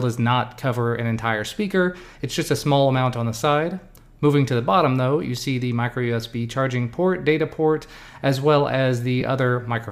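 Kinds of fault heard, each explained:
Lost LE Audio frames: one 7.5 ms frame drops out at 9.21 s. The decoder patches it by reusing the last spectrum with random signs, leaving a noisy blip.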